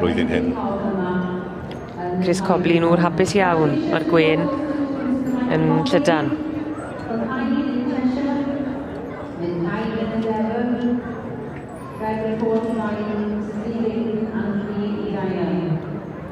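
No technical faults are audible.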